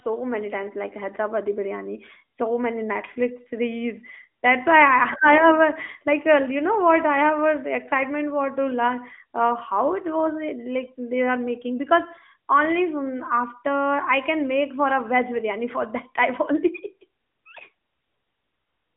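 No faults detected; the speech sits in a narrowband phone channel with nothing above 3.6 kHz.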